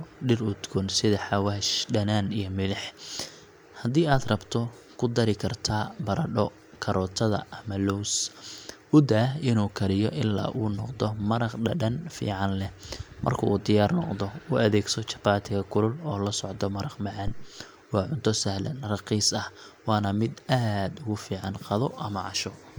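At 17.28 s, right after "socdo maraq", a phantom power thump lasting until 17.56 s: a supply switched on or off on a live input sends a step through the coupling capacitors. It peaks at about -19 dBFS and decays within 64 ms, a single deep thump, unlike a plosive's breathy pop.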